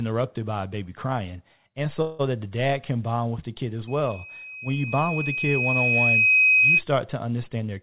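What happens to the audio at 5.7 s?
At 5.7 s you're deep into a loudspeaker feedback squeal. It kicks in right after "with the kid as", at 3.87 s, and runs to 6.82 s. The mic is catching its own loudspeaker, and at 2.5 kHz the loop gain tops one, so that tone keeps feeding itself. It swells over about three seconds into a piercing whistle, ending up roughly 10 dB above the speech, sitting below the 4 kHz ceiling of the narrowband call audio.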